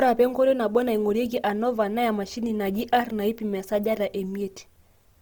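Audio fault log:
Throughout: Opus compression. The speech sounds grainy and rough throughout, with a noisy, sandy texture on tones. There is little of the swirling or holes that MP3 leaves. This likely comes from Opus running its music mode at a low rate, which fits about 24 kbps. Bands starved of bits get filled with folded copies of lower bands or with noise. The bandwidth stays full, with content reaching about 20.3 kHz, so the damage is texture rather than muffling.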